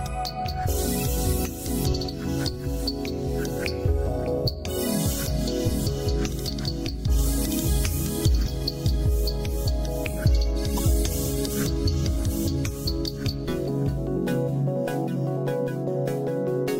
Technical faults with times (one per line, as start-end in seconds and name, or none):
10.77-10.79 corrupt frame decoded